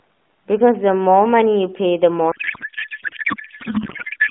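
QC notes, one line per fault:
2.32–4.31 s: codec payload misread. Octet-aligned AMR appears decoded as bandwidth-efficient, so frame fields land wrongly and narrowband speech collapses into garbled warbling noise. The spectrogram shows structureless smeared energy replacing formants.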